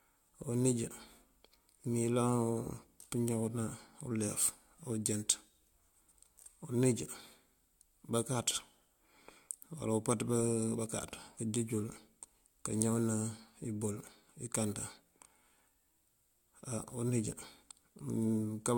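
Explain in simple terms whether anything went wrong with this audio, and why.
Something did go wrong: the speech has generation loss from start to finish. It sounds swirly, hollow and smeared, consonants lose their crispness, and the very top of the treble is missing. The likely cause is that the audio was compressed and decompressed several times over, perhaps around four passes, with each round adding fresh damage. A single low-quality compression would sound thin but steadier; here the smearing and watery swirl go well beyond that.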